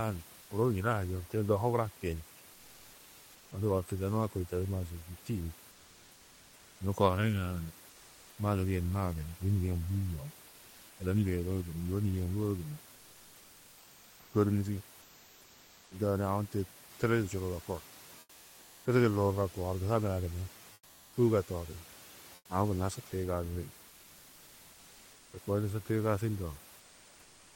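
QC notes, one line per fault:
0.41–0.49 s, 5.71–6.79 s, 7.89–8.37 s, 15.01–15.91 s, 18.19–18.85 s, 20.73–21.13 s, 22.35–22.49 s and 26.79–27.55 s: comfort noise in place of the background. The sender likely stopped transmitting during these pauses (Opus DTX), and the receiver filled each gap with generated noise. The room noise, about 25–27 dB below the loud parts, gives way to a flat, textureless hiss from 80 ms to over a second long. It sits about 1–7 dB lower, dipping furthest at 22.35 s.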